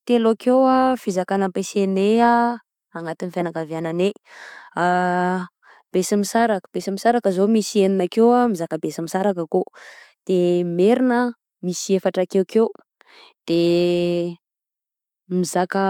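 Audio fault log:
No faults heard in recording.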